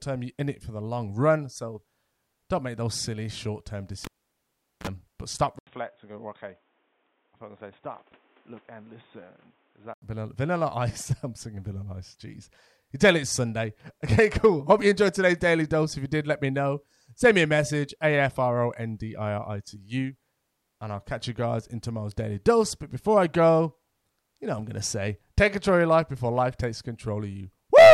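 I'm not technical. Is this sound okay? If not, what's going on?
No. At 4.05 s, right after "those silly short term", a cable was pulled and plugged in: a pop, almost 0.8 s of near silence, a brief mains buzz, then another pop before "but stop".

From 5.59 s to 10.02 s, the likely cause is an input switched to a poorer device. After a short gap, the voice turns dull, with nothing above about 3.8 kHz, before clearing again.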